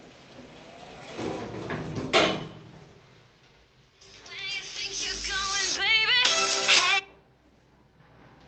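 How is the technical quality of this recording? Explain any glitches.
No glitches can be heard anywhere in the recording. It has gone through a WebRTC call path, and the top end stops at about 8 kHz, which points to a wideband call codec such as Opus.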